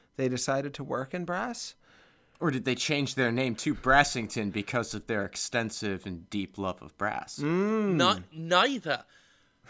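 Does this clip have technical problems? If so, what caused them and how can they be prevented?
No, there are no technical problems in this clip.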